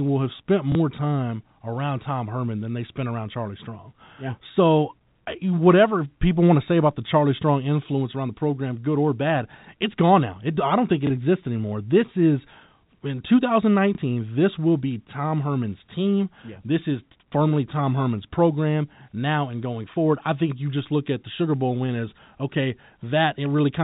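At 0.72 s, between "will have spent" and "time around", at 11.07 s, between "I don't think" and "exists anymore", and at 13.95 s, packet loss with last packet repeated fills 30 ms by replaying the previous packet, which fits one 30 ms packet each time. Each repeat sounds like a small blip rather than the silent gap of a plain dropout.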